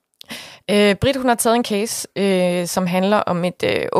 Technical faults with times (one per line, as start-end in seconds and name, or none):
none